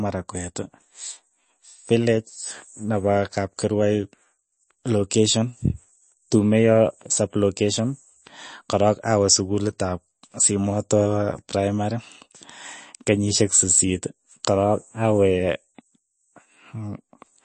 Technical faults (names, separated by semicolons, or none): MP3 compression